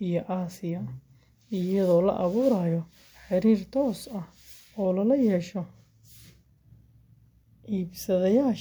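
No technical faults are audible anywhere in the speech.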